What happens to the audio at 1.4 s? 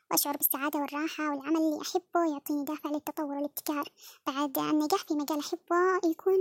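At 1.4 s the speech sounds high-pitched and hurried, raised by about 7 semitones and running 1.5 times too fast, and it stays that way from start to finish. This is a wrong sample rate: the samples are played back faster than they were captured, with no conversion, so pitch and tempo rise together by the same ratio. A 1.5 ratio fits audio recorded at 32 kHz being played at 48 kHz.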